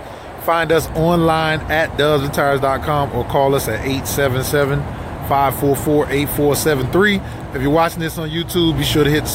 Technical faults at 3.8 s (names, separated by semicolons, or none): none